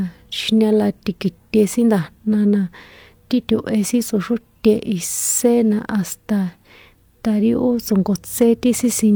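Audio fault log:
No audible faults were found in this speech clip.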